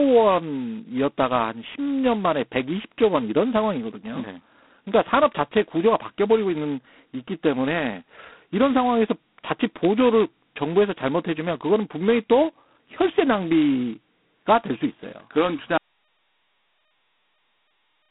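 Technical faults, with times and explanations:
Throughout, G.726 ADPCM: the speech has passed through a telephone-grade adaptive differential coder running at a very low bit depth, which fits 16 kbit/s, where each sample carries only a coarse step from a predicted value. The damage is heavy. A harsh, rasping hiss rides on the speech and swells and fades with its loudness. The line band runs only from about 200 Hz to 3.4 kHz, and nothing above 3.9 kHz survives, leaving the sound thin and boxed-in.
15.78 s to the end, audio dropout to silence: the input signal was cut off, likely through a lost connection or mute somewhere upstream, while the recording kept writing empty samples. The speech stops abruptly mid-flow and is followed by dead silence with no room tone or background of any kind. Whatever was spoken after that point is missing, and the sound never returns before the clip ends.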